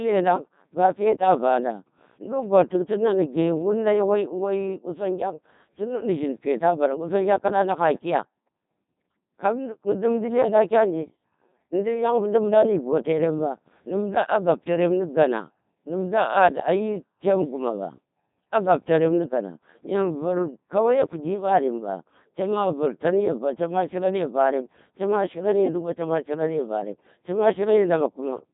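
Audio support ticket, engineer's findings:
Codec 2 vocoder, throughout the clip. Robotic, buzzy speech; waveform detail gone, replaced by sine-wave resynthesis from pitch, voicing, energy and spectral envelope only. Heavy damage, consistent with a low-rate mode around 2.4 kbit/s. Nothing above 3.8 kHz. Probable component: digital-radio voice link.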